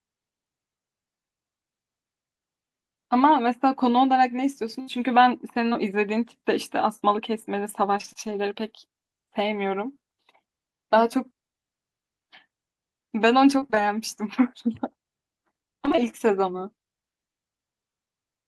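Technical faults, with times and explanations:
7.97–8.17 s, repeated packet loss (robotic sound): several gaps up to 23 ms, half the stretch patched by repeating prior sound. This gives choppy speech and repeated stripes on a spectrogram.
15.85–15.99 s, repeated packet loss (robotic sound): gaps up to 20 ms, with 43% of the stretch filled by extended sound. The waveform shows copied, blunted cycles and the result sounds choppy.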